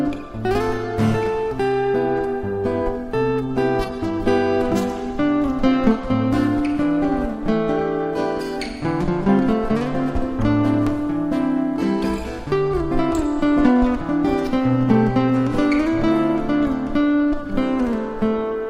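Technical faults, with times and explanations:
Nothing to flag here; I listened all the way through and didn't catch any technical problems.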